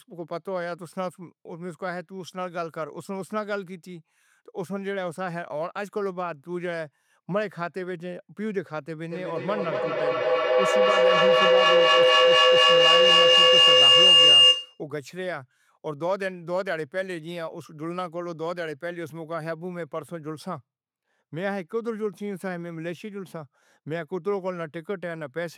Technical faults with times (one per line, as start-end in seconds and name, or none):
9.10-14.83 feedback howl